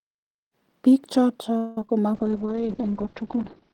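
After the smooth fade-in, which completes by about 0.57 s, repeated packet loss (robotic sound) hits from 1.57 to 1.90 s. Four holes open in quick succession, the longest 194 ms. Most of that stretch is patched by extending earlier sound. It turns choppy, with pieces missing.

A call bitrate drop follows at 2.14 s and lasts to the end. The sound loses its top end, with bandwidth falling from 20 kHz to 6 kHz. It turns muffled and rough. That fits the encoder falling from about 32 to 10 kbps.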